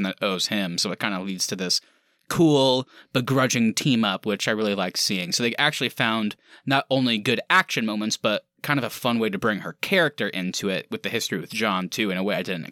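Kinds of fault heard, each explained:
No technical faults can be heard in this speech recording. There is nothing to list or explain.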